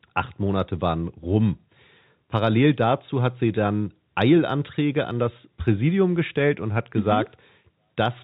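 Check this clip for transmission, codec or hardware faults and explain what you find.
Nothing faulty found: the speech has the narrow band of G.711 telephone coding and at most a faint quantisation noise that follows its level, as that format should.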